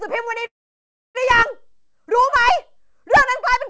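At 0.46 s the speech stops abruptly. A brief smeared tail of the last sound trails off, then near silence holds for about 0.64 s until the speech resumes at 1.17 s, picking up exactly where it left off with nothing skipped. This is a call audio freeze: packets likely stalled in transit, the jitter buffer drained, and the receiver bridged the wait, pushing everything after it about 0.69 s later. Throughout, the audio has the call codec's ceiling at 8 kHz.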